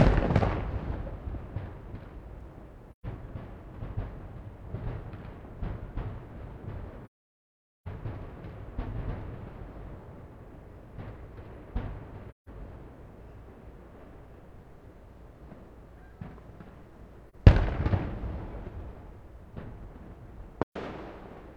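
These are sounds marred by AAC frame loss with muting. The sound drops out at 2.92 to 3.06, 7.05 to 7.88, 12.30 to 12.48, 17.30 to 17.35 and 20.63 to 20.77 s. The longest gap lasts about 0.81 s. The shortest is a brief dip of about 43 ms, which points to a single lost frame. The decoder zeroed the missing frames. Overlapping windows then fade the sound out and back in.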